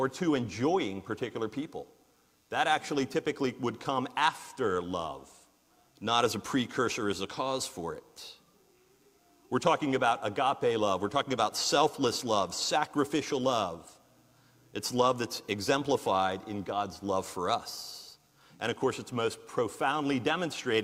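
No faults to report anywhere in the audio.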